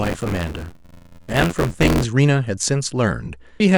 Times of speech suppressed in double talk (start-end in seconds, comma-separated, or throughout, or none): none